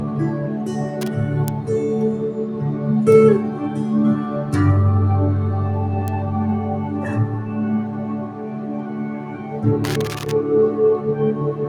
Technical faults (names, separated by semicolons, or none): noise suppressor applied to music or sounds; loose connector crackle; bit error spike